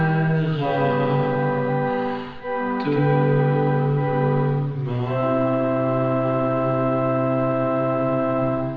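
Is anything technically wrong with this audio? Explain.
No, nothing stood out as technically wrong on listening to this music.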